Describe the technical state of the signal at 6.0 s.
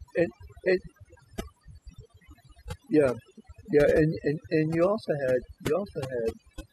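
At 6.0 s the speech sits over a near-silent, twinkling background: overdone noise removal, present throughout, with bands near the noise estimate pushed almost to nothing.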